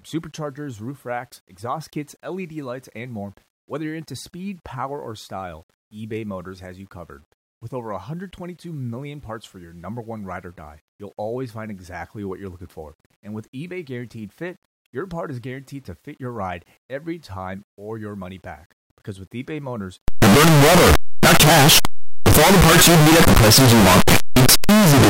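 From 20.08 s to the end, the speech turns into violent, harsh distortion, likely from signed and unsigned mixed up in 8-bit samples; the waveform jumps across the whole range at each zero crossing and the spectrogram floods broadband.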